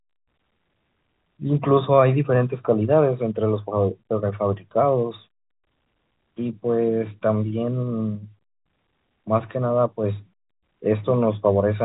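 Nothing goes wrong anywhere in this stretch of speech, which just carries the usual narrow telephone sound of G.711 coding, with nothing above about 3.8 kHz.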